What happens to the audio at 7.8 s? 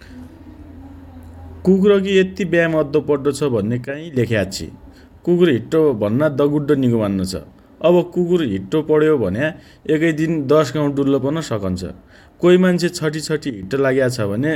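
Nothing goes wrong at 7.8 s; the speech carries on intact through that moment, with no dropout, click, distortion or other audible fault.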